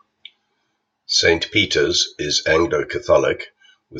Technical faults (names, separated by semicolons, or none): none